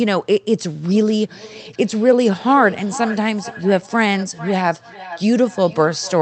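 From 0.89 s onward, speech repeats about every half second, thin and ringing, about 15 dB down: feedback echo between two devices recapturing each other's playback.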